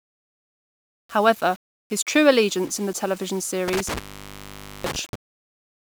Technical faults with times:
0.00-5.87 low bit depth without dither
3.68-5.15 intermittent contact

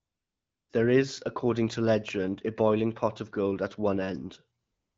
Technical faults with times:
0.00-0.69 AMR comfort noise
4.63-4.97 AMR comfort noise

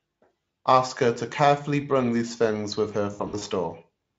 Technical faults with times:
3.13-3.43 VoIP packet loss concealed by the speech codec

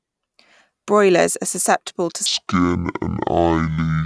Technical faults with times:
2.26-4.05 wrong sample rate

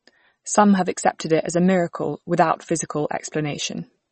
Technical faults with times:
0.00-4.12 MP3 compression

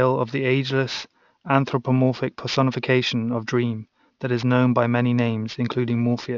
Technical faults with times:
0.00-6.37 aliasing

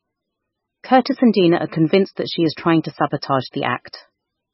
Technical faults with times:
0.00-4.54 MP3 compression

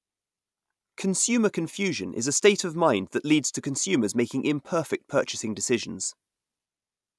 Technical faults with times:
none

